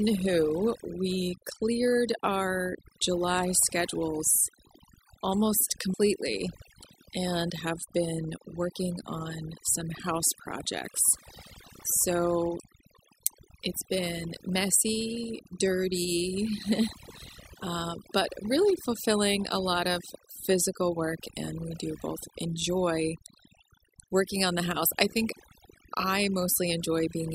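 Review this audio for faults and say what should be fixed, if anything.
Overdone noise removal runs through the whole speech clip. The noise reducer was set too aggressively. It pulls individual frequency bands far down, or shuts them off, whenever they sit close to its noise estimate. Quiet parts of the voice fall below that line and vanish with the noise. The background drops and breaks up into twinkling, warbling specks. To prevent it, use a gentler reduction setting and check the result by ear before export.

Damaged data in a compressed stream is heard from 5.94 to 5.96 s. Part of the encoded stream there is corrupt. The decoder misreads the affected frame and loses its place. It then hunts for the next valid frame header. The result is a brief blip, about 20 ms long. To prevent it, verify the file's integrity after transfer and re-fetch or re-encode from a clean source.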